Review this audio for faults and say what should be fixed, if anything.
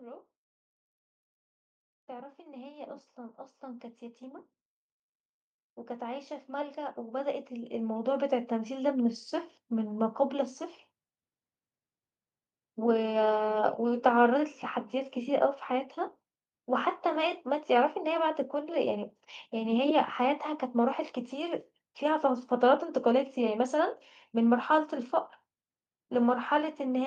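The speech and the room noise behind it swell together twice, from 2.06 to 4.53 s by about 8 dB and from 5.99 to 8.82 s by about 12 dB. This is automatic gain rising: the gain control judged the input too quiet and slowly raised its gain. To prevent it, disable the AGC and set a fixed input level.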